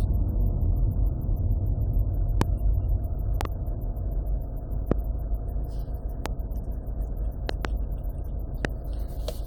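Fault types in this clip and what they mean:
Loud pop: sharp thumps land about 20 dB above the sound, six times from roughly 2.4 s to 8.7 s, two of them as quick double pops. The sound carries on underneath, so it's likely a voltage pulse such as static or a switch glitch.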